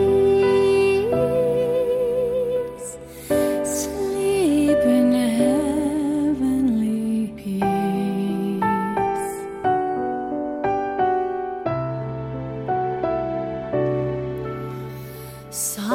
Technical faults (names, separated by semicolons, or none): none